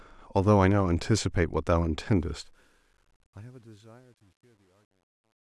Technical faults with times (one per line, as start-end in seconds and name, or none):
2.17-5.42 truncation distortion on a fade